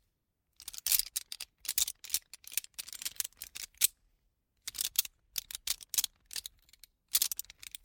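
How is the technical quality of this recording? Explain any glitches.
No glitches or technical faults are audible anywhere in the recording.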